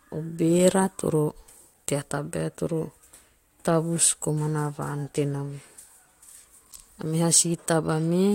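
An overlap between stream segments occurs at 3.03 s in this speech. Two segments of about 4 s claimed the same stretch of time, and trimming the overlap discarded roughly 9 ms of audio that was never actually duplicated. The waveform jumps across the gap, producing a brief click or tiny skip.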